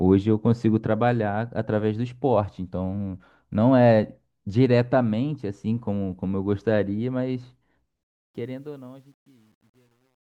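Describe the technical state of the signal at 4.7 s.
At 4.7 s the speech signal is intact, with no audible fault at that moment.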